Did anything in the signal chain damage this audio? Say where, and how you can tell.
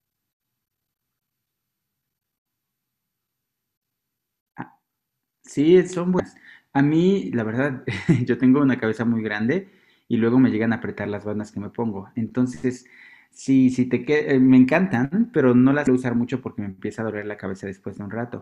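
Yes, there is damaged data in a compressed stream, at 6.17–6.20 s and again at 15.84–15.87 s, each a brief blip of about 30 ms cutting across the speech. The fault sits at the codec stage, in the stored or streamed compressed data. Corrupted bytes leave the decoder unable to read those frames properly, so it outputs garbled audio and loses sync until it finds the next valid frame header.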